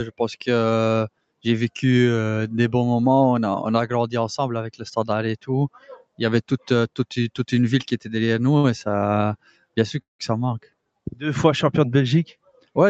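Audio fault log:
Throughout: noise suppressor applied to music or sounds. A speech-tuned suppressor treats sustained parts as noise, so the level keeps swinging by around 5 dB rather than dropping out in one place.
1.09–1.45 s, 5.69–6.20 s, 9.39–9.77 s, 10.61–10.90 s, 12.33–12.76 s: sound cut by the noise suppressor. Sustained or decaying sound sinks by up to about 22 dB (about 21 dB in the last) for a few hundred milliseconds, while sudden onsets pass. Unlike a stall, nothing is held or repeated.
8.57–8.66 s: short stall from a late packet. The last sound is stretched for 62 ms until the packet arrives. Nothing is lost, so it sounds like a brief hold rather than a gap.
10.02–10.21 s: call audio freeze. The sound continues for a moment and then fades into about 150 ms of silence before resuming at the point where it stopped. This is likely caused by delayed packets emptying the jitter buffer. 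It is longer than the 8.6 s stall and includes a real silence instead of a simple hold.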